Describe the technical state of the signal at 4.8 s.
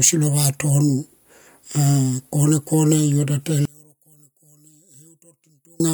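At 4.8 s the speech has collapsed to a faint remnant, part of a drop of about 32 dB lasting from 3.65 s to 5.8 s. The likely cause is one channel inverted: with one side's polarity reversed, the shared centre content cancels on a mono sum, leaving only the small difference between channels. A waveform shows the envelope shrinking to a sliver there, and a spectrogram shows the whole band dimming sharply.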